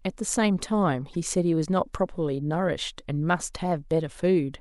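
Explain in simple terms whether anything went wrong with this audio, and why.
At 1.13 s the speech gives a brief glitch. This is damaged data in a compressed stream: corrupted bytes made the decoder misread a frame and lose its place momentarily.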